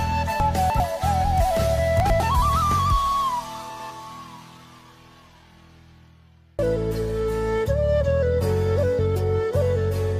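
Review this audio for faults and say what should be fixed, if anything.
Chunks out of order: 100 ms blocks were delivered or written late and played after the ones that should follow them. A chunk three places late gives the jumble from 0.4 to 0.8 s, and one-place swaps give jumbles at 2.0 to 2.2 s and 3.7 to 3.9 s. Each event has three hard joins. Sequence-number every chunk and reorder in a jitter buffer before playback or writing.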